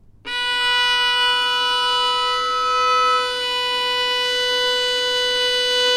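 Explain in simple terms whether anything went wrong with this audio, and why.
Something did go wrong. From 0.59 s to 3.48 s there is loudspeaker feedback squeal. A microphone was picking up the speaker it was feeding. That sound went round the loop again and again, and one pitch got stronger each time. Here that pitch is a high tone near 1.3 kHz. It swells up over about two seconds and ends up louder than the sound itself, until it stops at 3.48 s.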